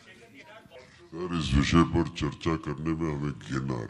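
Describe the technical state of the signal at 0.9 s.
At 0.9 s the audio sits in a section at the wrong speed, from 0.76 s to the end, playing at 0.74× and roughly five semitones low, likely from a clock mismatch. Harmonics on a spectrogram sit compressed downward, and the waveform looks stretched.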